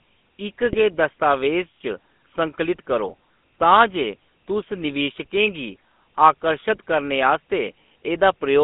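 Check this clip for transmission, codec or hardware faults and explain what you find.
Two faults are present in this speech clip.

The GSM full-rate codec colours the whole recording. The sound is confined to roughly 200 Hz to 3.5 kHz, and the vocal-tract model with sparse pulse excitation leaves a buzzy, gravelly roughness that plainly fits the 13 kbps full-rate coder.

GSM bit errors hit between 0.62 and 0.77 s. Corrupted filter, pitch and gain parameters reached the decoder, distorting the spectrum and level frame by frame. The result is a short burst of squawks and gargling, which points to several consecutive 20 ms frames being damaged.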